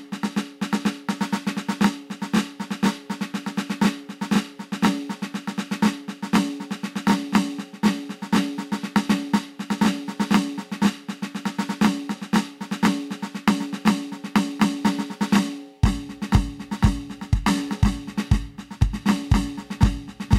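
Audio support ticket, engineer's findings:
No faults found in playback.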